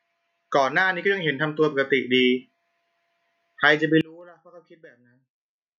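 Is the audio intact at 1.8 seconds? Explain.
No. At 1.8 seconds the speech and the background noise are swelling up together, both getting steadily louder across a span from 1.02 to 2.51 s, with a total rise of about 6 dB. This is automatic gain rising: the automatic gain control judged the incoming level too quiet and ramped its gain up gradually. Because it amplifies the whole signal, the room sound climbs right along with the voice.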